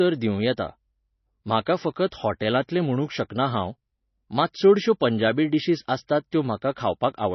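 Speech runs through heavy MP3 compression for the whole clip, with nothing above 5.9 kHz, which fits a very low bitrate near 24 kbps. Unlike a simple low-pass filter, weak frequency lines flicker on and off between frames, giving a watery swirl, likely from starved encoding.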